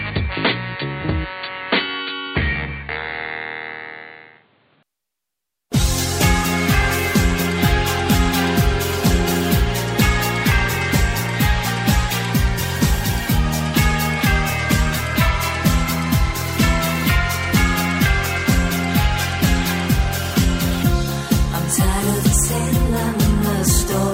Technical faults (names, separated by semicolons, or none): input switched to a poorer device